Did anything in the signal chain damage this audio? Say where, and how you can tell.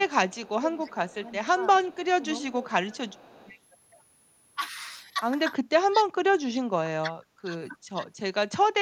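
Yes. A switching supply whistle sits in the analogue stage for the whole clip: a faint tone near 10 kHz, about 25 dB below the speech, wandering between 9.3 and 12.4 kHz. A spectrogram shows a thin, drifting horizontal line across the top band.

Echo leak appears in call processing at 0.29–0.5 s, 0.87–0.95 s, 1.93–1.97 s and 2.85–3.53 s. A faint copy of the speech, about 30 dB down, trails the original by 314 ms. The likely cause is a far-end echo canceller letting loudspeaker pickup through. On a spectrogram, weak duplicated speech patterns sit shifted in time.

Speech suppressed in double talk, also from call processing, shows at 0.4–2.7 s, 3.37–3.53 s, 5.88–7.54 s and 7.92–8.07 s. Level dips by roughly 10 dB, at 5.88–7.54 s by around 35 dB, and at 7.92–8.07 s by around 20 dB. That is likely an echo canceller ducking during overlapping talk. On the waveform the envelope is abruptly notched.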